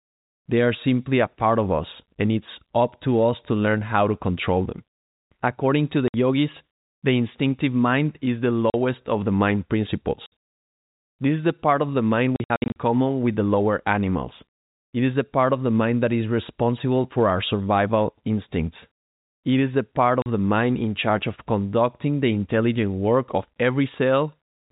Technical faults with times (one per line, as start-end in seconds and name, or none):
6.08-6.14 packet loss filled with silence
8.70-8.74 packet loss filled with silence
10.26-10.32 packet loss filled with silence
12.36-12.76 packet loss filled with silence
20.22-20.26 packet loss filled with silence